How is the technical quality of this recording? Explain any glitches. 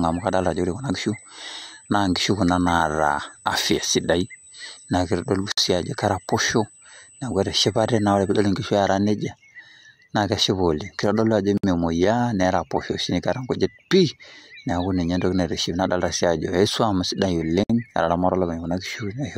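The recording has two technical faults: a steady electrical whine in the first half and three brief dropouts where separately encoded pieces were joined.

A USB whine runs from 0 to 8.47 s, stopping just before "inkishu eera nejia". It is a fixed 8 kHz tone roughly 25 dB below the speech, caused by the USB bus's 125-microsecond microframe current draw leaking into the audio through power or ground. On a spectrogram it shows as a thin horizontal line at 8 kHz.

Gaps at a join of encoded pieces occur at 5.52 s (56 ms), 11.58 s (60 ms) and 17.64 s (60 ms, just after "swuam sidai"), one every 6 s. The pieces were encoded separately and joined untrimmed, so each one's start-up silence and end padding remain. The speech cuts out and then resumes where it stopped, appearing as flat notches in the waveform and vertical blank strips on a spectrogram, with smeared edges.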